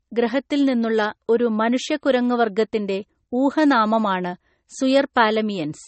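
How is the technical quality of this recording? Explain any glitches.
The recording is compromised throughout by layered compression damage. Transcoding between lossy codecs runs the whole way through: the sound was likely encoded twice, first by a low-rate MP3 stage and then by AAC-LC. The second encoder wastes bits reproducing the first one's artefacts and adds its own, so both kinds of artefact are heard at once. Nothing remains above 8.4 kHz, leaving the speech dull and muffled.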